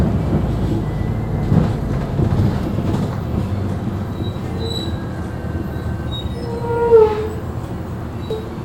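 Damaged data in a compressed stream shows up from 8.30 to 8.34 s near the end of this recording of sounds, as a brief glitch lasting only about 30 ms. At that point the encoded data no longer makes sense to the decoder: bytes have been lost, blanked or overwritten by foreign material. The decoder misinterprets or rejects the affected frame, drops out of sync and hunts for the next valid frame header before clean playback resumes.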